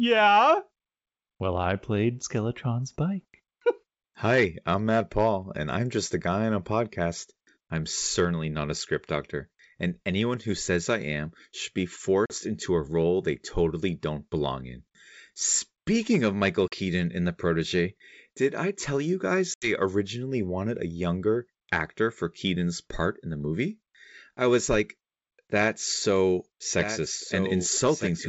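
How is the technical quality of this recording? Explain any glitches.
The recording has two kinds of glitch: three short dropouts from packet loss, and a doubled audio track at the very end. The G.722 wideband telephone coding at 64 kbit/s keeps speech clear up to about 7 kHz.

Packet loss on an ADPCM call occurs at 12.26 to 12.37 s, between "I am should be" and "into a role they", at 16.68 to 16.75 s, and at 19.54 to 19.70 s, between "I tell you guys" and "originally wanted a younger". Lost packets were replaced with silence, leaving hard-edged holes of 40, 40 and 80 ms, which fits roughly two, two and four packets. Because ADPCM codes each sample relative to a prediction, the decoder's predictor and step size drift away from the sender's during the gap. Speech therefore resumes slightly distorted, then settles within a few tens of milliseconds.

A doubled audio track starts at 26.10 s, just after "I was like that's", and runs to the end. 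A second full-band copy of the speech trails the original by roughly 1.5 s at about 10 dB lower level. It has no reverberant decay or room colour and begins abruptly. The likely cause is the same signal being captured again through a slower path, or an edit holding two copies out of step.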